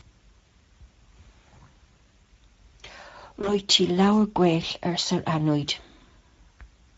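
Right from the start the speech has that Speex codec character, and the damage is plainly audible: a grainy, hoarse edge, with the excitation not quite carrying the natural texture of the voice. That's what a CELP coder does when it's short on bits for the excitation and has to approximate it. The level of grit fits a mid-quality Speex mode around 16.8 kbps rather than the near-vocoder bottom setting.

Then at 3.41 s there's a short dropout patched over by the codec itself, the classic VoIP packet loss concealed by the speech codec. The gap itself sounds like roughly one lost 20 ms frame. The decoder filled it by carrying its last pitch and filter forward at reduced gain, so you hear a brief smear instead of silence. Because each frame builds on the previous one, the voice stays a bit weak and off until about 3.61 s.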